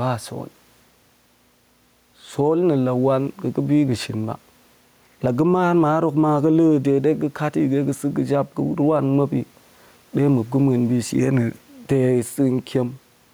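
Gain pumping runs through the whole of the speech. The likely cause is input gain set far too high, with a fast limiter or compressor clamping the level down each time the talker gets loud. The room noise sits about 42 dB below the speech, and the gain swings by roughly 5 dB. Loud and quiet passages end up squeezed together, so delivery sounds flattened.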